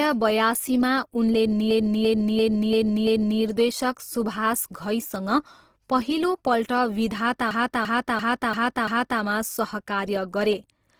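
A speech clip with two kinds of fault. Twice, the system stalled while the sound hardware kept replaying the same stretch of its ring buffer: a system hang loop from 1.71 to 3.41 s and again from 7.51 to 9.22 s. Each time a 341 ms fragment repeats exactly, five times over, at about 2.9 repeats per second, which fits a 16384-sample buffer. At that length it comes across as a slow, mechanical stutter rather than a buzz, and essentially no audio is lost around either loop. Throughout the clip the speech sounds rough and grainy, with a noisy, textured edge on voiced sounds rather than swirling or watery holes. The bandwidth stays full, reaching up to about 20.2 kHz, so the damage is a plainly audible graininess rather than muffling. This is likely Opus compression in its music-oriented CELT mode at around 16 kbps, where band energies are kept but the fine detail is filled in coarsely.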